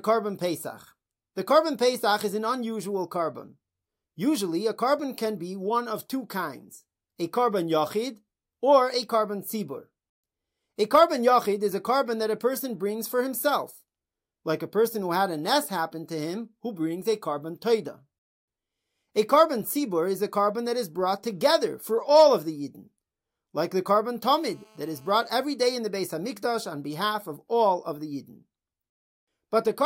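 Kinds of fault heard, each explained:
GSM phone buzz: from 24.27 to 25.27 s, a hard, raspy buzz sits under the speech, about 32 dB below it. A nearby 2G handset on a call was pulsing its transmitter about 217 times a second, and the audio circuitry rectified those radio bursts into an audible tone at that rate, dense with harmonics. For the full second it holds steady, ignoring the speech, which is what marks it as radio interference rather than part of the recording.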